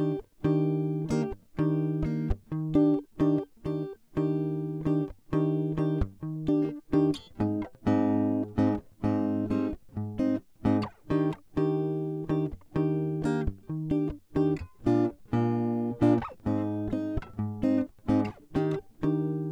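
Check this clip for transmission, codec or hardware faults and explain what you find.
No faults can be heard anywhere in this music.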